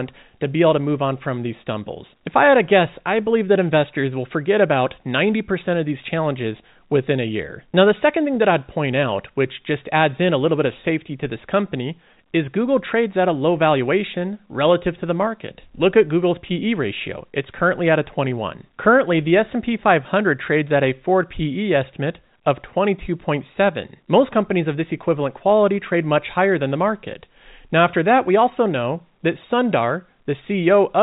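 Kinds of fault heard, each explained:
No faults can be heard.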